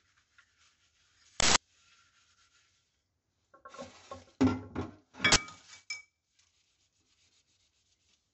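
Right from the start there's a watery, swirly quality with nothing above 8 kHz, which is likely MP3 compression at a low bitrate, around 50 kbps. The encoder has chopped the top end and keeps dropping weak frequency components in and out, so the damage is plainly audible. At 1.4 s there's an uninitialised buffer: for 160 ms, to 1.56 s, playback reads a block that never had audio written into it. Leftover memory comes out as a loud blast of digital noise. It happens again at 5.32 s, a shorter 40 ms burst ending at 5.36 s.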